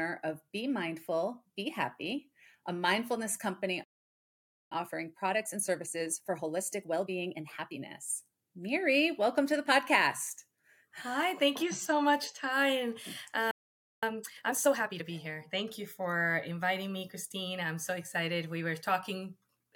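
The audio cuts to silence in mid-flow twice, from 3.84 to 4.72 s (about 0.87 s) and from 13.51 to 14.03 s (about 0.51 s): a playback stall, likely the player running short of data or its thread being blocked. Straight after each gap the sound comes out hurried but at normal pitch, at 1.25 times speed from 4.72 to 7.72 s and 1.5 times from 14.03 to 15.05 s. This is time-compressed catch-up, where the player trims its backlog by dropping and cross-fading short slices.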